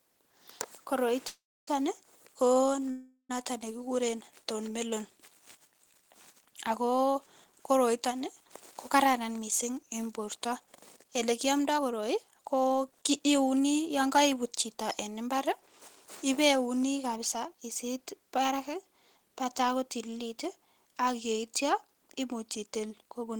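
At 1.27 s and again at 2.90 s the sound stalls in a call audio freeze, most likely because packets were held up in transit and the jitter buffer ran dry. The receiver stretches the last sound into a buzzy tail that fades out, then resumes at 1.69 s and 3.31 s from exactly where it stopped. Each freeze inserts about 0.4 s of filler with nothing lost. The first decays into roughly 270 ms of silence, the second into only about 70 ms.

From 9.06 s to 13.89 s a jitter buffer speed-up drains the backlog. The receiver repeatedly cuts out pitch-period-sized slices, removing roughly 0.4 s in total. Over that span the speech plays at about 109% of its normal rate with its pitch unchanged, so it sounds noticeably hurried before settling back to normal pace.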